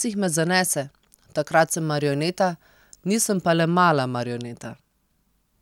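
Video or display buzz runs from 1.66 s to 3.66 s of this speech clip. Interference from a screen or video cable is leaking into the audio path, putting a 50 Hz buzz at the picture's field rate under the speech, with a gritty hash riding above it. A faint, very high whine sits at 15.6 kHz, the line-scan rate. The whole intrusion is low, roughly 45 dB below the signal, so it reads as a thin background rasp.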